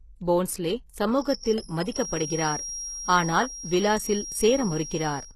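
From the start, the speech has plainly audible damage of the kind HE-AAC compression leaves, likely at a low bitrate around 16 kbps. Its treble is rebuilt from copied lower bands, so the s sounds turn gritty and metallic. A spectrogram shows a hard ceiling at 12.3 kHz, with patchy upper bands above the crossover.

From 1.07 s to the end, a feedback whistle sits at a steady 5.3 kHz, roughly 10 dB below the speech. It is likely a loudspeaker-to-microphone loop at the edge of feedback, heard as a thin single pitch behind the speech. On a spectrogram it is a continuous horizontal line.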